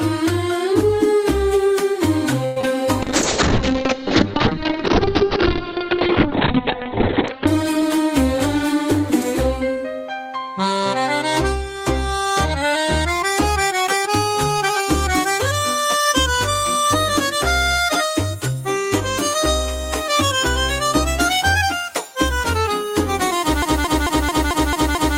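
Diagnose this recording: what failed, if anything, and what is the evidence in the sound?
Network stage: repeated packet loss (robotic sound) from 2.45 to 2.67 s. Four gaps fall in this short stretch, the longest about 108 ms. Concealment covers about 63% of the span by extending the last received sound into each hole, and some audio is missing outright. The result is choppy, with a synthetic, robotic quality from the same fragment being stretched over and over before the stream resumes.

Call processing and codec stage: a call bitrate drop from 3.03 to 8.74 s. The encoder's rate falls from 48 to 7 kbps and stays at the lowest setting for about 3.4 s. At that rate Opus narrows the coded bandwidth from 20 kHz to 4 kHz, so the audio turns muffled and coarse, with the top end gone. Full quality returns by 8.74 s, once the bandwidth estimate recovers.

Buffer stage: a jitter buffer speed-up from 7.81 to 9.85 s. 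The receiver's buffer held more audio than its target and trimmed short pitch-period pieces, removing roughly a tenth of a second in total to bring latency down. Playback runs at about 104% speed with pitch unchanged. This overlaps the tail of the bitrate drop and slightly compresses the timing of that passage.

Playback or stream stage: a broken-record loop from 23.62 s to the end of the clip. A 221 ms fragment repeats exactly, back to back, without a break, and the audio that should have followed never arrives. The likely cause is a stall in the player, encoder or stream that left it resending the last fragment in its buffer.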